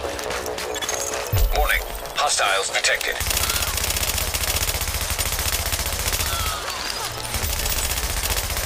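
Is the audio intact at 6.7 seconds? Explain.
No. From 6.54 s to 8.57 s, something is injecting a repeated pulse into the signal path, likely interference from nearby equipment or a faulty connection or power supply. The result is a train of clicks: around fifteen near-identical pulses at a steady 7.9 per second, peaking roughly 15 dB above the surrounding sound. At 6.7 s this is heard as regular ticking or popping laid over the audio and continuing through any pauses.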